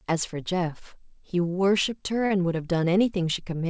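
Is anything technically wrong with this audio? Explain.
Yes. There is a short stall from a late packet at about 2.26 to 2.32 s in this speech. A packet reached the receiver after it was due, and the jitter buffer ran dry. The receiver held and stretched the last sound for about 41 ms until the packet arrived. It then resumed from the same point, so nothing is lost. That sound is drawn out slightly too long, with a faint buzz or dip. Everything after it runs about 41 ms later. The call path's codec, which fits G.722, leaves nothing above 8 kHz.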